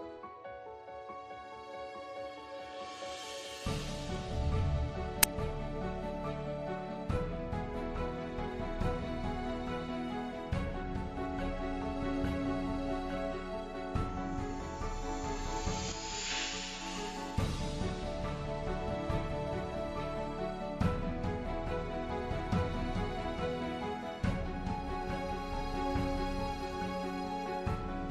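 A single burst of very loud static at 5.23 s, lasting only a few milliseconds with hard edges on both sides, is a case of file tags played as audio. A block of embedded data, here the compressed bytes of a cover picture, has been read as though it were sample values. Compressed image data is close to random, so it decodes as very loud white noise rather than as anything tonal, and it begins and ends abruptly.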